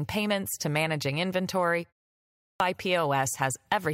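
Right after "payments to managing inventory", there's a pause of about 0.34 s. Then at 2.18 s we get a clipped start after a pause: the output device dozed off in that gap and took until 2.6 s to wake, so roughly 420 ms of speech vanishes and the next phrase lurches in abruptly, missing its opening sounds.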